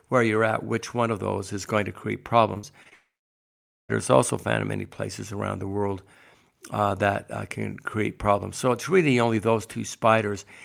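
Speech that turns choppy and robotic from 2.53 to 2.93 s, right after "is going to create": short holes, the longest about 57 ms, are filled by stretching the previous sound. About 30 percent of that stretch is patched this way, which is repeated packet loss. The audio then breaks off entirely from 2.93 to 3.91 s. A brief fading continuation gives way to roughly 0.85 s of silence before the sound resumes at "is also found in", with nearly a second missing. The likely cause is a long network dropout.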